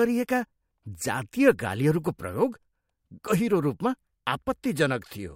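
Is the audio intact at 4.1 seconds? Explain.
Yes, at 4.1 seconds the speech plays through intact, with no audible fault at that moment.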